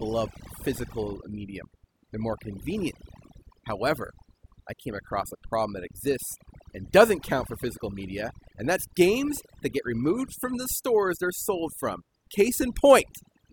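A speech recording with overdone noise removal running the whole way through. The noise reduction was pushed too hard, so bands sitting near its noise estimate get shut off. The background drops and breaks up into twinkly specks.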